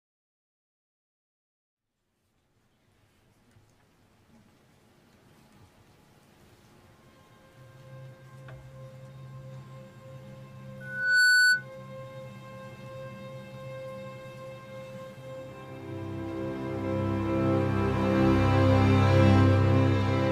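From 10.80 to 11.66 s, loudspeaker feedback squeal: a 1.5 kHz tone swells within half a second to about 10 dB above the signal as the mic-speaker loop exceeds unity gain.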